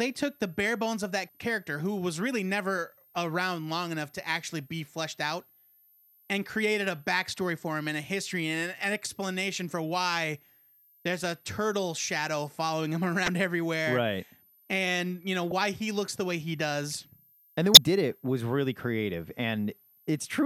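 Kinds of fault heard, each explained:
Switching supply whistle: A switch-mode power supply somewhere in the chain is cycling at a rate you can hear, and it leaks in as a thin, high whistle sitting under the speech for the whole clip. The pitch wanders within about 12.9 to 13.3 kHz rather than holding steady, which is typical of a supply whose switching shifts as its load changes. It stays quiet, roughly 35 dB below the speech.
Damaged data in a compressed stream: Some bytes in the encoded stream got corrupted, so the decoder misreads those frames, loses sync and has to hunt for the next valid frame header. Each hit comes out as a short chirp or blip. There are five of them: a very brief one at 3.15 s, another at 9.05 s, a longer one from 13.25 to 13.28 s, one at 15.51 s, and a last from 17.74 to 17.77 s.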